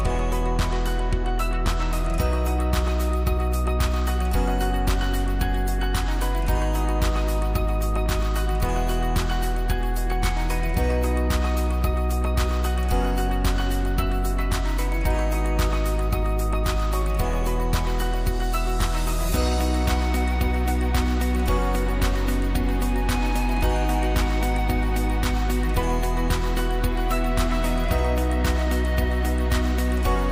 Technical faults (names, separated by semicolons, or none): loud pop